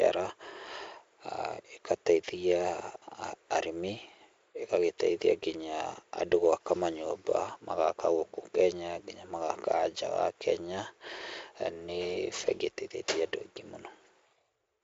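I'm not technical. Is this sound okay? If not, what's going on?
Yes, nothing stood out as a problem when listening to this speech recording.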